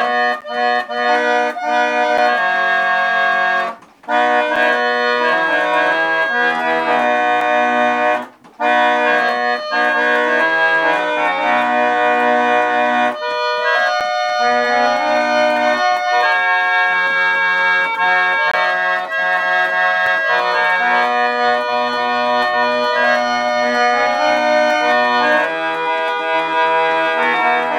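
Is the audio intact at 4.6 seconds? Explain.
No, there is a block of digital silence at 4.56 s, lasting about 5.8 ms, which fits a 256-sample buffer that went unfilled. The audio cuts out abruptly and returns with no fade, and at that length it is heard as a single brief tick.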